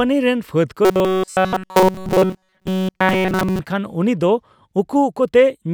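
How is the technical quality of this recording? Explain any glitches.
The recording has one clear glitch, a stretch of robotic sound from repeated short buffers between 0.85 and 3.59 s, just after "ᱨᱮᱱ ᱯᱷᱟᱹᱫ". For almost three seconds the speech becomes a hard, metallic drone locked at 188 Hz, loosely following the words. The cause is likely audio arriving too seldom, so the playback kept looping a tiny slice, about 5.3 ms, in place of new audio. Virtually all of that stretch is repeated material.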